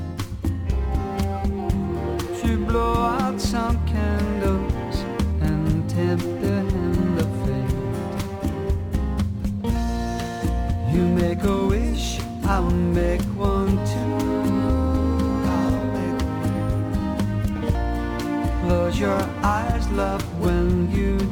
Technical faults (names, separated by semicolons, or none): crude rate conversion